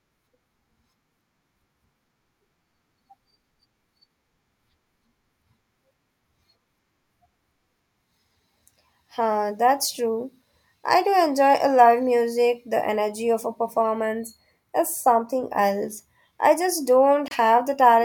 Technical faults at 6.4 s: none

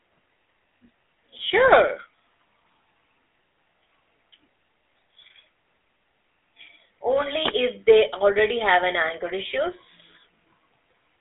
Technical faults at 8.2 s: GSM full-rate codec

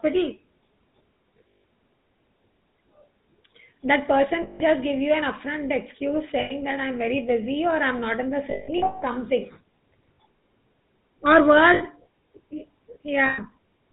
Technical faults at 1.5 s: GSM full-rate codec; lost GSM frames

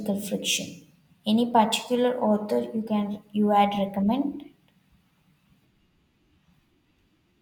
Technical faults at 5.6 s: none

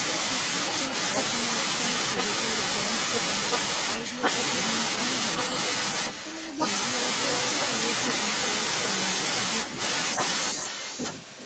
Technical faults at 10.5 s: echo leak

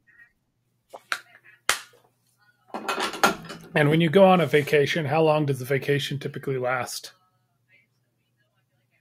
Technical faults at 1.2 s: none

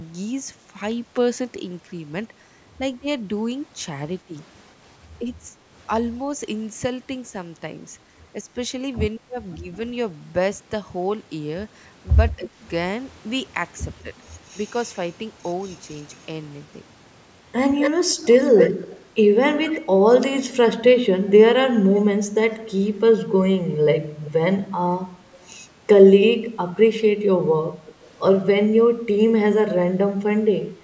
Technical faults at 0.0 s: none

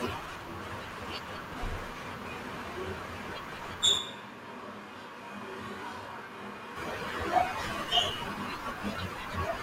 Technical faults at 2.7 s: none

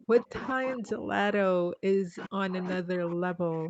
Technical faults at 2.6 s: speech suppressed in double talk

